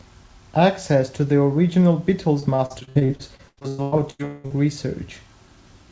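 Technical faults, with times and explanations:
2.40–4.52 s, repeated packet loss (robotic sound): nineteen dropouts cluster here, the longest about 188 ms. Each is patched by extending the last received sound, so nearly half this stretch is filler, making the speech choppy, with pieces missing.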